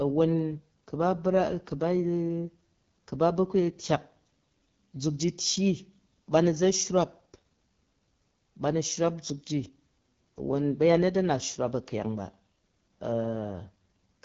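A speech recording carries AMR wideband (HD Voice) codec damage from start to finish. The speech sounds plainly rough and raspy, the texture of the codec's pulse-driven vocal tract model running short of bits, which fits one of its two lowest modes, around 8.85 kbit/s. Content stops near 7.4 kHz. Above about 6.4 kHz the band holds only synthetic shaped noise rather than true speech detail.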